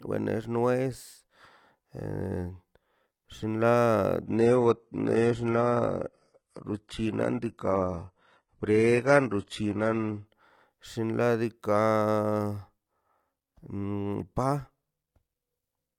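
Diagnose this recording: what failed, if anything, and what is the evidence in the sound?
Adaptive stream at a lower bitrate, from 4.26 s to 10.26 s. This is a network-driven codec fault: the connection slowed, so the player switched to a leaner encoding of the speech for six seconds, then switched back. The change arrives abruptly with no gap in the sound, and the treble above about 11.8 kHz disappears, which fits a drop from a conventional AAC stream to a low-bitrate HE-AAC one.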